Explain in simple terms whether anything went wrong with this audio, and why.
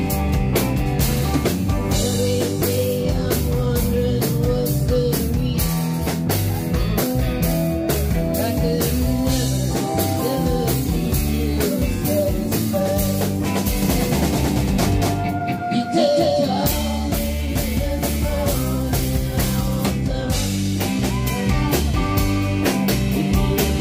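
Between 13.82 and 16.60 seconds there's a doubled audio track: the sound plays twice, the second copy about a fifth of a second behind and roughly as loud, starting and stopping abruptly. Likely it was captured a second time through a slower path.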